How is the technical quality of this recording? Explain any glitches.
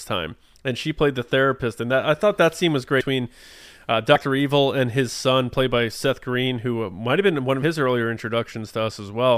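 The speech has three short dropouts where audio goes missing. Compressed frames skipped occur at 2.99 to 3.01 s after "thought that scene was", at 4.14 s, and at 7.62 s after "might have been one". Whole compressed frames were lost or rejected by the decoder, so the sound jumps ahead, by about 200 ms at first and about 50 ms later, which fits losing several 26 ms frames. Because neighbouring frames overlap, each join is a brief smeared blip rather than a hard click.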